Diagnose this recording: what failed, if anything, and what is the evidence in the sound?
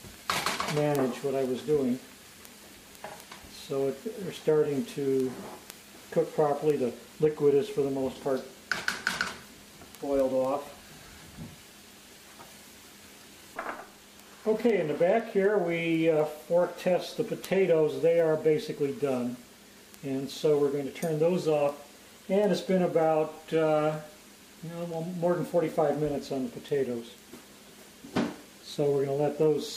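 Word clock ticks from 0.2 to 29.7 s, roughly every 0.3 s, at the digital link: the receiver's unlocked clock drifts, slipping one sample per tick.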